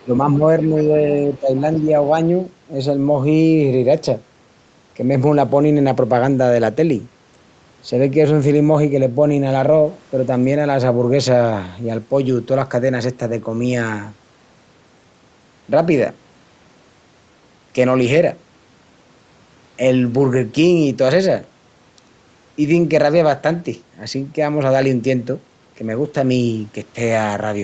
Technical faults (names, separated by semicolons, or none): other side's voice leaking through; speech suppressed in double talk